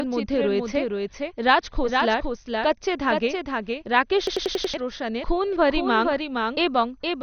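Speech runs throughout with a second, full-band copy trailing about half a second behind at about 5 dB lower, a doubled audio track that most likely comes from a second, slower capture path. On a spectrogram every syllable pattern reappears, fainter, shifted by that fixed offset, with no smearing or reverberant tail. The whole clip also carries MP2 compression artefacts: dull, gurgling, granular speech with nothing above 6.5 kHz, likely from a low bitrate around 48 kbps. A spectrogram shows a hard ceiling at 6.5 kHz and upper sub-bands blinking on and off in blocky patches. From 4.27 to 4.74 s a system hang loop repeats one 93 ms fragment five times, a 10.8 Hz machine-gun stutter that fits a 4096-sample buffer, replacing about half a second of audio. The waveform there shows identical repeated blocks.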